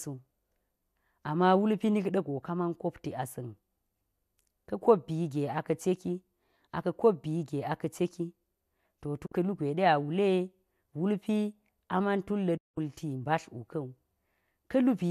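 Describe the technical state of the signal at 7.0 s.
At 7.0 s the speech signal is intact, with no audible fault at that moment.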